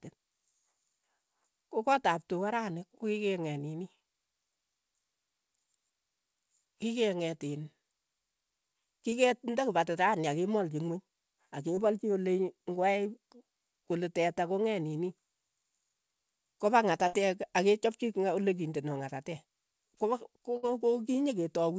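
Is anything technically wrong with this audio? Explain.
Yes. The speech arrives over a call path whose band stops at 8 kHz, consistent with G.722, and it has two kinds of packet loss.

Short concealed packet loss occurs at 9.10–9.14 s and 11.76–11.79 s. Each time about 20 ms of audio failed to reach the decoder in time. The receiver bridged roughly 16 ms of it by extending the preceding sound and then merged back into the real signal. The result is a brief smear or wobble, and a quick consonant can drop out.

A burst of packet loss occurs at 17.07–17.15 s and 20.57–20.65 s. Around 60 ms went missing in each. The receiver carried the last sound forward for about 56 ms and 59 ms respectively, fading it as it went. A voiced sound becomes a short held buzz and anything else a dying hiss, and then the speech jumps ahead with that stretch gone.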